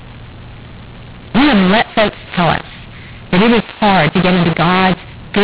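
From start to finish the speech carries a mu-law and A-law mix-up: mu-law samples read back as A-law, scrambling levels so the voice turns harsh and pauses fill with hiss. The waveform shows jagged, uneven amplitudes and no true silence; the spectrogram shows broadband noise up to the 4 kHz telephone ceiling.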